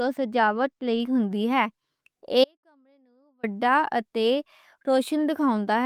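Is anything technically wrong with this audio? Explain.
Yes. From 2.44 to 3.43 s the speech suffers an audio dropout to a faint residue. For almost exactly one second the signal drops abruptly to a faint trace, roughly 40 dB below normal, then snaps back. The likely cause is a brief break upstream while the downstream path stayed live.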